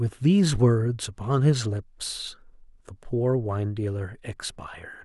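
Nothing goes wrong at any point in this speech recording, so there's no fault to walk through here.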